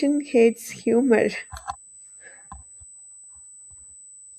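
A thin, fixed-pitch whine runs under the speech for the whole clip, sitting roughly 15 dB below it. This is USB whine: 8 kHz tone from the bus's 125-microsecond microframe current draw leaking through power or ground, strongest at its 16 kHz harmonic.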